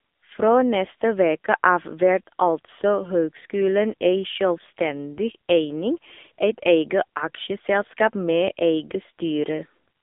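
From start to end, the speech carries AMR narrowband mobile codec damage: nothing passes above 3.7 kHz, and the band sits around 250 Hz to 3.6 kHz. Unlike a simple telephone filter, the vocal-tract model leaves voices buzzy and synthetic, suggesting a low mode near 6.7 kbps.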